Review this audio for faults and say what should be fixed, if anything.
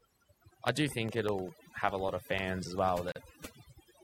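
Overdone noise removal runs through the whole clip. Bands near the noise estimate are pulled far down, taking the quieter parts of the speech with them. The background drops and breaks up into twinkling specks. Re-process from the original recording with a much gentler reduction setting.

Periodic USB or driver dropouts tick regularly from 0.08 s to 3.93 s, one every 0.1 s, about forty in total. Each loses around a millisecond of audio, replaced by silence, and is audible only while speech is present. Keep background tasks off the audio interface's bus and use a larger driver buffer.

A gap at a join of encoded pieces opens from 3.12 s to 3.16 s. It is a 41 ms gap with smeared edges, after which the sound continues where it stopped. This is encoder start delay and last-frame padding left in at the join. Encode as one continuous file, or trim delay and padding with gapless joining.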